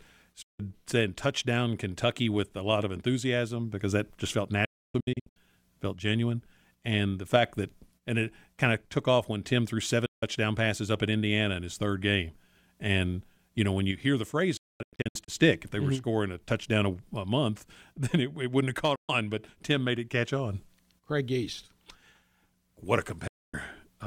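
Digital broadcast dropouts mute the speech at 0.42, 4.65, 10.06, 14.57, 18.95 and 23.27 s. Bad frames trigger quick 8 ms fades to silence. At 4.65 and 14.57 s, several holes scatter over 0.7 s. The speech sent meanwhile is lost.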